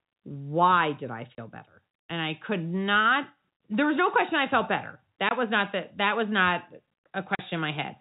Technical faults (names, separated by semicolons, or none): packet loss filled with silence